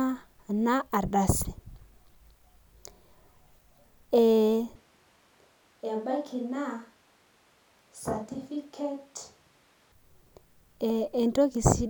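At 4.76 s the speech abruptly turns roomy and hollow, a switch to a distant microphone, likely because the close microphone's feed dropped out and a farther one took over. Level falls by around 10 dB, bass thins, and room noise sits roughly 30 dB below the voice. The waveform shrinks suddenly, and the spectrogram loses low-frequency energy while reverberant smearing and a raised noise floor appear, until an equally sudden return at 9.92 s.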